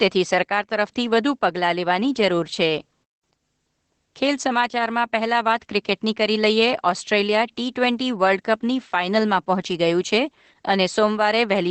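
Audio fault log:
throughout, Opus voice compression: the speech has passed through Opus at a low rate. Its sound points to the linear-prediction voice coder working in wideband mode, which fits a bitrate of around 12 kbps. Nothing survives above 8.4 kHz, so sibilants and breath lose their top and the voice sounds muffled. The excitation is coded so coarsely that the result is plainly hoarse and slightly robotic.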